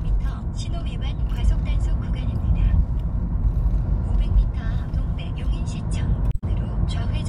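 Damaged data in a compressed stream appears from 6.28 to 6.44 s in this recording of sounds, a brief chirp, squawk, click or short hole about 0.15 s long. Corrupted bytes there leave the decoder misreading frames, losing sync and hunting for the next valid frame header.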